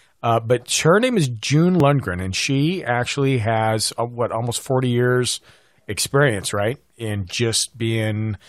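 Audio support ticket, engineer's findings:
Dropped buffer (overrun) at 1.80 s, before "and she actually", and at 3.87 s, before "uh what almost". Small forward jump, no gap. Likely capture overrun: samples overwritten before read, roughly 10 ms lost each time, edges joined directly.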